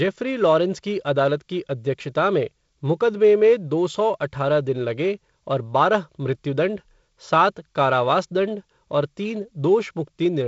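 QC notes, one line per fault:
No faults; the speech is carried by G.722 wideband telephone coding, with content stopping near 7.7 kHz and the light upper-band hiss and slightly noisier lower band of what sounds like the 48 kbit/s mode.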